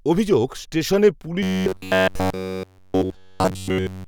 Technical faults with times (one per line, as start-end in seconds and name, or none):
1.43-4.07 robotic sound from repeated short buffers